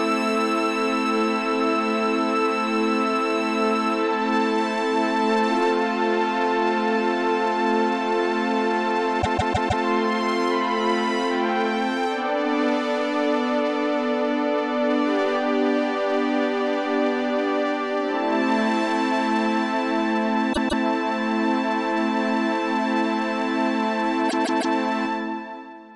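Repeated frames stutter the audio at 9.21 s, 20.52 s and 24.28 s. Each time, the same block of roughly 0.16 s plays again, which fits a run of about six compressed frames being sent twice or more. The block replays four extra times at 9.21 s, twice at 20.52 s and three times at 24.28 s. The three stutters stretch the audio by about 0.63 s, 0.31 s and 0.47 s.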